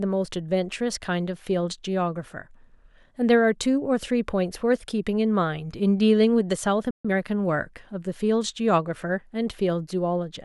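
At 6.91 s the speech cuts off mid-flow for about 138 ms, a playback stall, likely the player starving for data; the waveform drops to a flat gap until 7.05 s. From 7.05 to 7.17 s, time-compressed catch-up plays the backlog at 2.0 times speed at normal pitch, sounding hurried, with tightly packed, choppy spectrogram segments.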